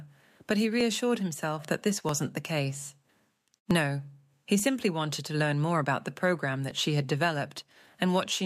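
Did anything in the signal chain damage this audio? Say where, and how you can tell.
Yes. Five isolated sharp clicks sit at 0.81, 2.09, 3.71, 4.60 and 6.71 s, each a thin vertical line across the whole spectrum with no gap or dropout around it. These are dropped samples, likely lost at the driver or buffer stage. About 0.7 ms of signal is missing each time, so the waveform jumps straight to a later value. That step is heard as a click while no audible content disappears.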